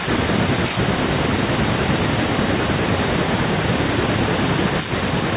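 There are no technical faults in this speech to describe in time order.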